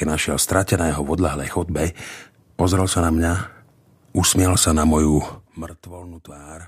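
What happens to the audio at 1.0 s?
Nothing goes wrong at 1.0 s: the speech carries on intact, with its level holding steady rather than being pulled down or pushed up as a fader would.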